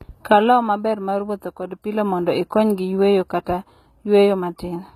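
Throughout the speech, the treble is synthesised rather than coded, likely by HE-AAC compression at a low rate that fits about 20 kbps. Upper bands copied from lower ones miss the true harmonics, so s sounds turn plainly gritty, lispy and metallic.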